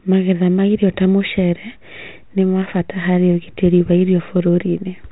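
Nothing goes wrong anywhere in this bit of speech, which simply has the narrow, phone-line sound you'd expect from G.726 ADPCM at 32 kbit/s, with nothing above 4 kHz and just a light touch of coding roughness.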